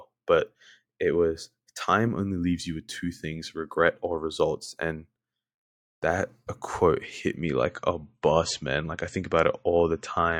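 Speech, with an adaptive stream dropping to a lower bitrate at 7.37 s, just after "that a quote hit", and staying there to the end. Treble vanishes above about 8.3 kHz and codec smearing rises, with no gap, which suggests a switch from roughly 128 to 36 kbit/s MP3.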